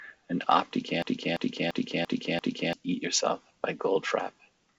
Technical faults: system hang loop

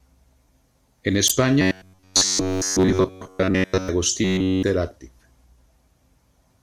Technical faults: damaged data in a compressed stream; robotic sound from repeated short buffers

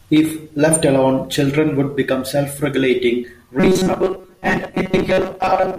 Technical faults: robotic sound from repeated short buffers

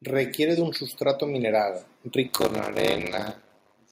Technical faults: automatic gain rising; block size mismatch (padded)

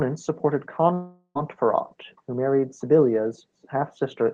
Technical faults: long network dropout

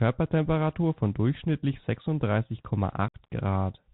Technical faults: Bluetooth CVSD headset codec; unconcealed Bluetooth headset packet loss

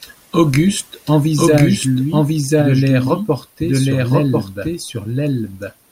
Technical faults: doubled audio track

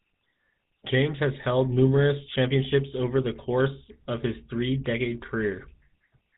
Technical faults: GSM full-rate codec

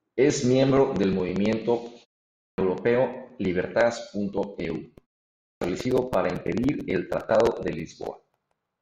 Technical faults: clipped start after a pause

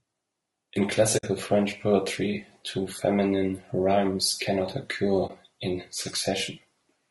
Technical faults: low-delay AAC compression; AAC frame loss with muting

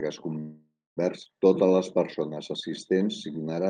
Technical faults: call audio freeze; skip ahead; jitter buffer slow-down

